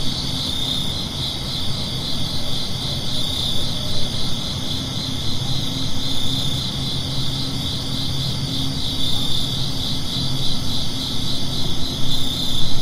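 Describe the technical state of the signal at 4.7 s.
At 4.7 s the signal is intact, with no dropout, clipping, glitch or other fault in the everyday sound there.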